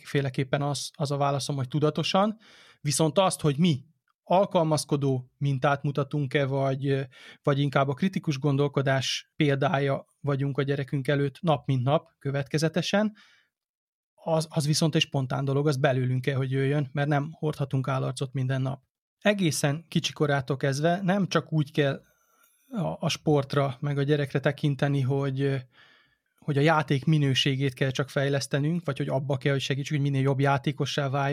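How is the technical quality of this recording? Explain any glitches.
No glitches are audible anywhere in this recording.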